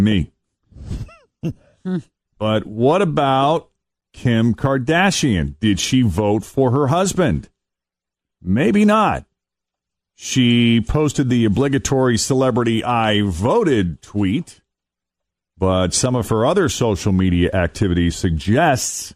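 From start to finish the speech has a dull, gurgling quality, the kind you'd know from low-rate digital radio, and that points to MP2 compression as the likely cause. With too few bits to go round the 32 sub-bands, the upper bands keep dropping in and out and what's left is coarsely quantised, so sibilance flickers and there's a granular grit to the voice. The damage is plainly audible and fits a stream at about 80 kbps.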